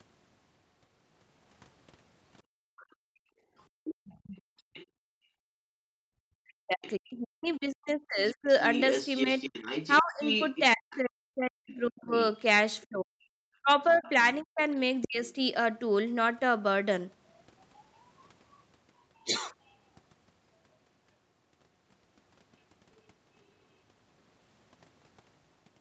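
From 2.43 to 5.69 s the room background sinks and drops out in patches totalling around two seconds, falling by about 36 dB at its deepest. This is background gated by the echo canceller, which clamped the microphone hard while the loudspeaker was active.

Within that stretch, from 2.77 to 4.86 s, a second voice sits some 20 dB under the talker. This is the other side's voice leaking through, likely because the echo canceller left part of the loudspeaker signal in the microphone feed.

Between 5.97 and 8.48 s the talker's speech dips, dulls and breaks up for around two seconds in all, sinking by roughly 40 dB at worst. This is speech suppressed in double talk, likely caused by both sides speaking together, so the canceller could not tell the talker from the echo and attenuated both.

From 6.84 to 15.07 s the far-end voice leaks through again, much stronger this time at only about 10 dB below the talker. 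Overlapping it, from 10.01 to 15.21 s, the double-talk suppression returns with the same roughly 40 dB dips.

A final, barely audible trace of the other side's voice appears from 17.95 to 19.74 s, around 40 dB down.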